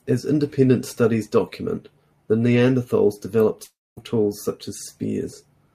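A long network dropout in a speech recording, most likely a stall in the incoming packets, cuts out about 0.34 s of audio from 3.63 to 3.99 s. The receiver stretches the last sound into a fading buzz, leaving about 0.24 s of near-silence before the speech resumes with the gap missing.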